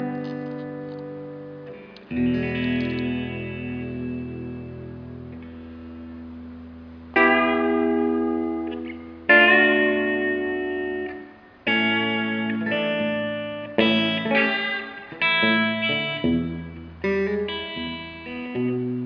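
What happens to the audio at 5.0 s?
Nothing goes wrong at 5.0 s; the audio plays through that moment intact, with no dropout, click or distortion.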